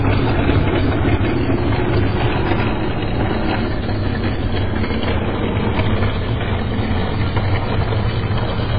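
Throughout, the sound is watery and swirling with nothing above 5 kHz, likely MP3 compression at a very low bitrate; the flickering, chirpy texture separates it from a plain low-pass filter.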